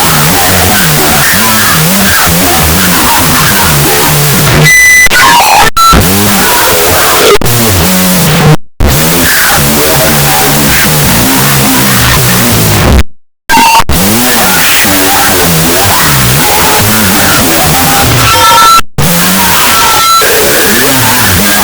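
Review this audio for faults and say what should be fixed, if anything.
Wrong sample width runs through the whole clip. The audio was written as 16-bit integers but read as unsigned 8-bit, so every sample splits into two, which halves the speed and drops the pitch an octave. The low bytes turn into loud hiss, and the real signal survives faintly underneath. On a spectrogram, a dense broadband noise floor covers the faint, downshifted signal. The waveform looks like dense fuzz. To prevent it, decode using the sample format stored in the file header rather than assuming a width.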